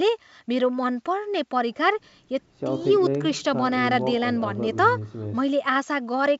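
At 3.93 s, bit errors on an ADPCM link cause a brief pop with a rough tail, seen as a waveform spike and a thin broadband spectrogram streak.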